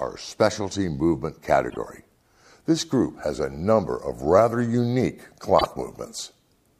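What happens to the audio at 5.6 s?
Between 5.59 and 5.66 s, two neighbouring frames are played out of order. A short stretch is decoded with its halves exchanged, so the signal jumps forward, then back, then forward again. The blocks are 26.1 ms each, which fits a swap of single frames. The result is a brief garbled flutter. No time is lost, and the audio continues in sync afterward.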